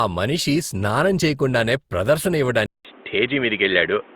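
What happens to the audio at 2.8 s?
From 2.66 s to the end of the clip, the sound narrows into an input switched to a poorer device. A gap of about 0.19 s marks the switch, and afterwards nothing passes above 3.8 kHz. The new input has its own dull, boxy tone and a fresh noise floor roughly 30 dB below the signal, at about the same level as before. The likely cause is a change to another microphone or a headset's call profile. Unlike a filter or EQ change, it brings a silent break, a different background hiss and a changed character, all at the same instant.

Running through this moment, as through the whole clip, is generation loss: a swirly, smeared, hollow quality with blurred attacks. The likely cause is repeated decoding and re-encoding with Opus at 64 kbit/s, several times over. Each pass quantises on a shifted frame grid, so the noise piles up. This separates it from a single low-bitrate encode, because the smearing is worse than 64 kbit/s alone would produce, and it is present before and after the switch.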